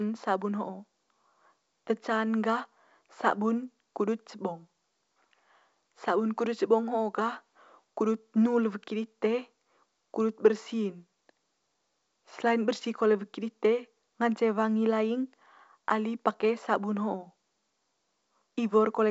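No technical faults occur at any point in this speech, so there are none to describe in time order.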